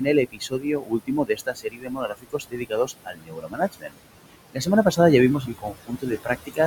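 Throughout the clip, a noise suppressor pulls down bands it judges to be steady noise by about 20 dB, frame by frame. The room noise, sitting about 12 dB below the speech, sinks between phrases and rises under them. From 0.26 to 3.97 s, that noise suppressor also mistakes speech for noise, turning down around three seconds of it by up to about 22 dB. The same speech cut returns at 4.53 to 4.68 s, dropping about 19 dB, and from 5.41 to 6.59 s, dropping about 20 dB across roughly 0.7 s. Soft consonants and word endings in these stretches sound swallowed and faint.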